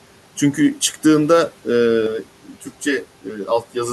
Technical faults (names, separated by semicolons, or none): channel delay (comb filtering)